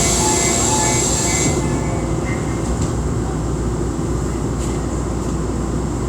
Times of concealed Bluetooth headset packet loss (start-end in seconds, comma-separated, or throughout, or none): none